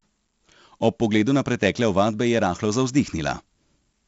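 Across the whole speech clip, 4-bit ADPCM compression coats every loud syllable in a gritty hiss that rises and falls with the level, and sharp onsets break up as the step size lags behind sudden jumps. The damage is heavy. Nothing reaches above 7.7 kHz, which fits a 16 kHz sample rate at 64 kbps and dulls the top. Unlike a steady noise floor, the grit vanishes in pauses, and it lacks the swirly, warbling smear of low-bitrate perceptual codecs.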